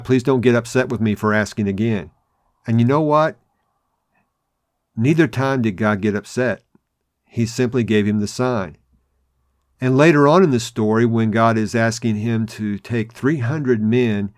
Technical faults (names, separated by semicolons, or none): none